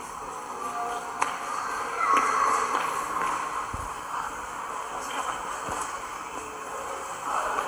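The clip is a recording of sounds, and nothing technically wrong can be heard in it. There are no audible faults at any point.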